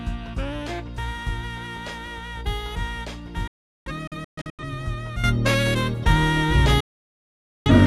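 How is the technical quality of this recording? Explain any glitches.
The recording has three clear technical faults: two broadcast dropouts and an abrupt level change near the end.

From 3.47 to 4.64 s, and again from 6.80 to 7.71 s, there is a digital broadcast dropout. The receiver stopped getting usable frames and muted until valid ones returned. The first dropout leaves several gaps totalling about 0.68 s over 1.1 s, the longest 384 ms. The second silences about 0.85 s. Each gap fades in about 3 ms, so the sound cuts almost instantly and whatever was broadcast then is gone.

At 5.24 s a sudden gain jump lifts the sound and its background noise together by about 12 dB. The level stays raised to the end. The likely cause is a digital gain change applied between one sample and the next without any ramp.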